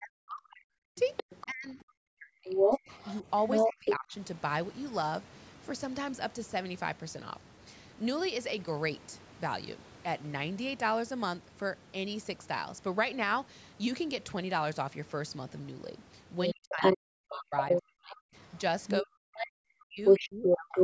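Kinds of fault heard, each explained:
Speech suppressed in double talk, 0.0 to 4.1 s, 16.5 to 18.4 s and 19.0 to 20.8 s: the talker's voice sinks steeply, dropping by something like 40 dB at its deepest, over a few seconds in the first stretch and about a second and a half in each later one. The likely cause is an echo canceller that heard both sides at once, could not tell the talker from the loudspeaker echo, and turned everything down.
Other side's voice leaking through, 0.96 to 1.46 s, 2.46 to 3.96 s, 16.44 to 19.45 s and 20.05 to 20.83 s: a second voice appears alongside the talker, a little quieter in the first scrap, then around as loud or louder, reaching roughly 10 dB above the talker near the end. It likely comes from the far side playing on the talker's loudspeaker and reaching the microphone because the echo canceller left part of it in place.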